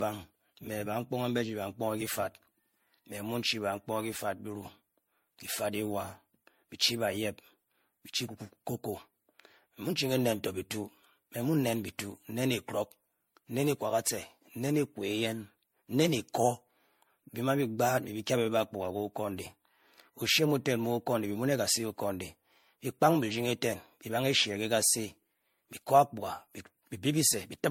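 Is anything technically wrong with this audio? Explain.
Yes. Generation loss runs through the whole speech clip. It sounds swirly and hollow, with a watery smear on the voice and consonant onsets that come across soft and blurred instead of crisp. Nothing comes through above 16.5 kHz. The likely cause is repeated MP3 re-encoding, something like five passes at what sounds like 64 kbit/s. Each pass re-quantises on a shifted frame grid, so the noise and spectral holes stack up beyond what a single encode at that rate would leave.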